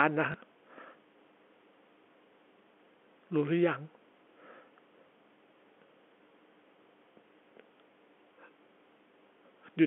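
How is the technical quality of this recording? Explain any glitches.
The recording carries one brief dropout glitch, heard over a telephone-band line limited to roughly 250 Hz to 3.4 kHz by G.711 telephone coding. From 0.32 to 0.34 s, packet loss with last packet repeated: 20 ms of audio went missing, fitting a single lost packet, and the previous packet was replayed, giving a small blip.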